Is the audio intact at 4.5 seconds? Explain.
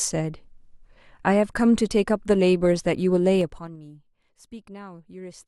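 Yes, the speech is intact at 4.5 seconds, with no fault at that moment.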